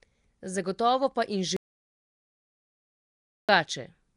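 Throughout, the speech has a rough, hissy halo, a smeared underwater quality, and nothing above 10.7 kHz, likely from Nellymoser compression filling weak bands with noise. From 1.57 to 3.49 s, an audio dropout to silence leaves about 1.92 s of silence with no room tone, consistent with lost input written as silence.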